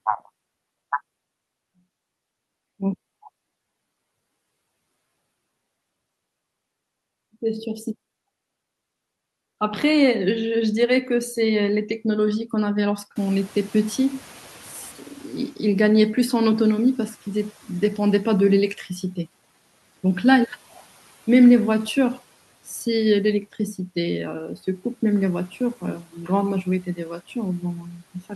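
Noise suppressor catching up, from 13.15 to 18.43 s: the room noise jumps about 22 dB around 13 s, the suppressor's estimate lags, and the noise comes through with less reduction at first, then sinks by about 8 dB over 5.28 s as it adapts.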